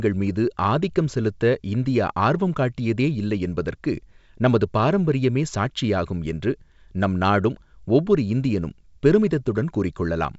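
No technical faults can be heard anywhere in this speech recording. It carries G.722 wideband telephone coding, with nothing above about 7.7 kHz and at most a faint trace of the coding in the upper band, which points to the codec's full 64 kbit/s mode.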